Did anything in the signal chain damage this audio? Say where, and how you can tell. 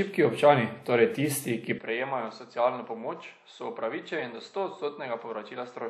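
Yes. From 1.78 s, right after "občani torej tisti ki", to the end, the audio loses everything above about 7.8 kHz, so the top end turns dull and boxy. The level drops by roughly 10 dB and a new background noise floor appears, around 40 dB below the signal. The change is instant, with no silence at the switch. This is likely the input switched to a poorer device at the driver or routing stage: the capture swapped to a microphone with narrower bandwidth, different gain and its own noise.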